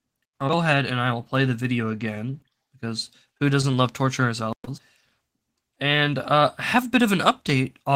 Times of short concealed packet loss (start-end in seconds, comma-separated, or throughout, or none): 4.65-4.69, 5.74-5.78